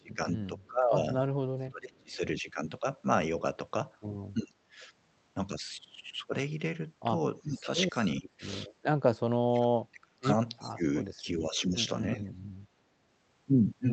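Speech over a call link, with the talker's level repeatedly pushed down by speech suppressed in double talk, at 0.0–0.96 s, 1.56–2.15 s, 4.47–4.82 s, 7.42–8.29 s and, longest, 9.27–12.33 s, where about 2 seconds are affected and the deepest dip reaches about 35 dB (elsewhere about 20–25 dB). The voice sinks or breaks into pieces rather than fading evenly, likely because an echo canceller turned everything down while both sides spoke. Unlike a dropout, the sound is attenuated, not replaced by silence or filler. An echo leak also appears at 0.65–1.25 s, faint at about 40 dB under the speech, and more plainly at 10.59–10.71 s at about 20 dB down. It is a copy of the voice trailing by 374 ms, likely loudspeaker pickup the far end's canceller failed to remove. The fixed lag sets it apart from room reverberation, which smears the sound continuously instead of repeating it.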